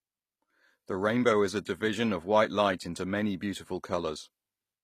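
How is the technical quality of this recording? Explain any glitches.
The speech has nothing above about 14.9 kHz throughout, a hard ceiling on the top end that a high-bitrate MP3 would not normally impose. That ceiling, together with the leftover artefacts of the first encoding, points to low-bitrate audio saved at a high bitrate. The likely cause is a low-rate source, such as HE-AAC at around 24 kbit/s, re-encoded as a generous MP3. The second encode preserved the damage but could not undo it.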